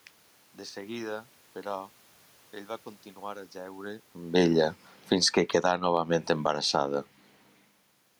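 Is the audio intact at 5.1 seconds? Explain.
No, right after "a jeure amb ella" the automatic gain is falling from 4.96 to 6.72 s: the AGC judged the input too loud or its background too strong and eased down about 7 dB, so sound and background sink together.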